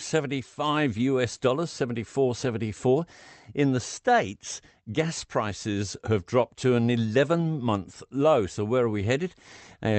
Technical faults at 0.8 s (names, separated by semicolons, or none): none